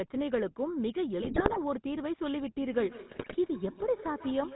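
Throughout, the GSM full-rate codec's pulse-driven vocal-tract model gives the speech a buzzy, gravelly roughness and removes everything above 4 kHz, consistent with 13 kbps coding. From 1.22 to 1.59 s and again from 3.1 to 3.37 s, GSM bit errors corrupt the decoder's filter, pitch and gain values, breaking the speech into squawks, pops and gargling. From 2.6 s to the end, feedback echo between two devices sends the speech back roughly every 150 ms, at its loudest about 14 dB below the direct signal, each repeat thinner and more ringing.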